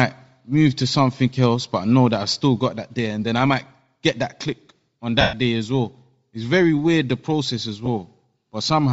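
All the way through, the speech has a breathy, grainy sheen on its upper frequencies, with the top end sounding noise-filled rather than clean. That's likely Bluetooth LC3 compression running at a low bitrate, which fits around 32 kbps with 7.5 ms frames.

From 5.21 to 5.33 s, right after "get that click on" and before "day as well", there's a 120 ms stretch of lost LE Audio frames, roughly 16 of them. The decoder keeps replaying the last spectrum with scrambled phase, so the sound smears into noise and then fades away. A shorter 15 ms dropout hits at 7.86 s, just after "weird the process as", and comes across as a brief noisy blur.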